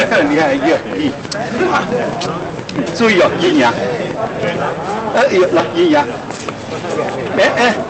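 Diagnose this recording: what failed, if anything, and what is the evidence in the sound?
Hard clipping runs through the whole recording. The signal was driven about 14 dB past what a converter or gain stage could pass, so a modest share of samples (around 7 percent) have flat-topped peaks. Every loud moment carries a harsh, buzzy fuzz rather than the warm rounding of soft saturation. That fuzz sits inside a top end ending near 8 kHz from the call codec, so the overload happened before encoding, not in the network or codec.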